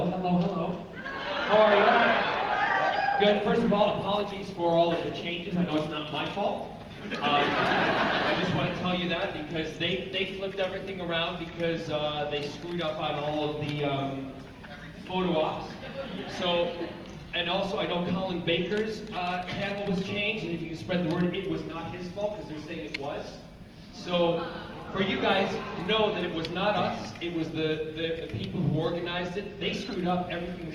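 There are no technical faults to describe at any point in the clip.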